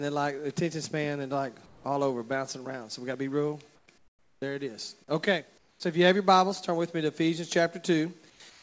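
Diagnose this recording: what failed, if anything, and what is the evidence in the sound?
Comfort noise in place of the background turns up in the pauses at 1.66–1.84, 3.76–3.88, 3.98–4.42, 5.58–5.80, 8.30–8.40 and 8.50–8.63 s. The real background drops out and a smoother, featureless hiss takes over, about 3 to 12 dB quieter, deepest in the 0.44 s stretch at 3.98 s. That points to call processing, likely discontinuous transmission: the sender stops sending in the gaps and the receiver fills them with synthetic noise. The band tops out at 8 kHz, which fits a G.722 path.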